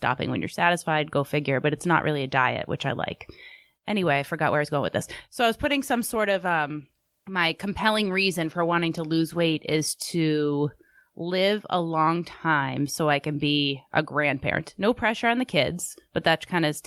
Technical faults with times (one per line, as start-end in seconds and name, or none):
5.62-11.63 call bitrate drop